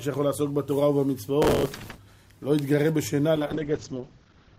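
From 1.42 to 1.98 s there's a burst of processor overload crackle: the processor kept missing its deadlines on short buffers, around 3 ms each, dozens in a row, replaying stale audio at each miss. That stacks up into a gritty, tearing crackle that stops once the load eases.

Then at 3.36 s a call bitrate drop kicks in and runs to the end. The encoder got squeezed hard, which fits a fall from about 128 kbps to around 11 kbps, and the top end collapses from 20 kHz to 8 kHz, so things go muffled and rough.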